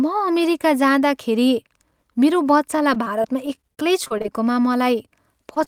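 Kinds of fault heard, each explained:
Repeated packet loss (robotic sound): From 2.77 to 4.26 s the speech turns choppy, with small pieces missing. Packets kept arriving lost or late, a dozen holes of up to 25 ms each, and every gap was patched by stretching the preceding sound before the next gap arrived.
Short concealed packet loss: Near the end, at 5.54 and 5.64 s, the speech briefly smears and wobbles. Each time about 20 ms of the call never reached the decoder, so the receiver continued the last sound across the hole and then blended back.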